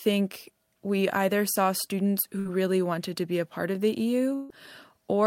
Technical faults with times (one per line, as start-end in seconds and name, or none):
2.39-2.47 burst of packet loss
4.35-4.51 burst of packet loss